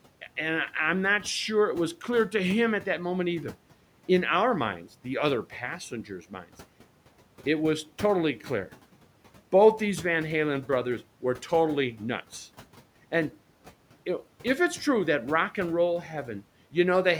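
A short speech recording, with one spot where the noise suppressor cuts into the speech itself, between 5.91 and 6.45 s, just after "our minds the other". Here the suppressor mistakes quiet speech energy for background and turns it down along with the room noise, which sits about 22 dB below the speech. The dip reaches about 9 dB and adds up to roughly a tenth of a second, so soft consonants and word endings sound swallowed. On a waveform the envelope pinches in briefly; on a spectrogram the faint upper-frequency consonant energy thins or gaps out.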